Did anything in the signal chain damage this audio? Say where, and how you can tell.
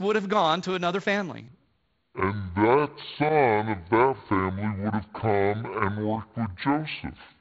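Yes. From 1.48 s, right after "gone to another family", through to the end at 7.41 s, this section at the wrong speed plays at 0.59 times normal, likely from a playback or resampling stage on the wrong clock. Pitch drops about ten semitones, slow and deep, through "for a year".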